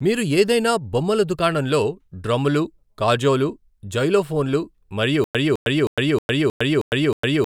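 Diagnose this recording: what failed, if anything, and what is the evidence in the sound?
From 5.24 s to the end, a 209 ms fragment of speech repeats seven times, each followed by 106 ms of silence: a stutter with silent gaps, likely a stalled playback buffer.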